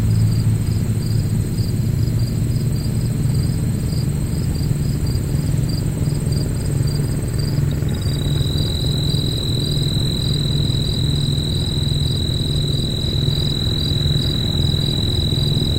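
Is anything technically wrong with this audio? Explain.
No, nothing technically wrong can be heard in this recording of sounds. It carries no audible fault from beginning to end.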